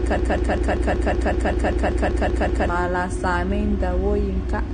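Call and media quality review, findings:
Broken-record loop, 0.00 to 2.69 s: a 0.19 s fragment repeats exactly, already under way at start, 13 times; likely a stalled player or stream resending its last buffer, dropping the real audio.

Low-bitrate audio saved at a high bitrate, throughout: nothing above 9.7 kHz, low-rate codec artefacts; likely a low-bitrate source, AAC-like, re-encoded to high-bitrate MP3, unable to restore lost content.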